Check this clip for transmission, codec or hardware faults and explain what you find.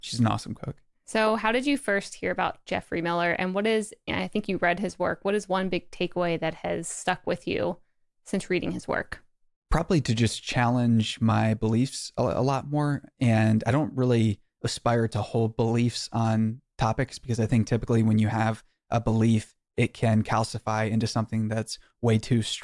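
No faults detected here.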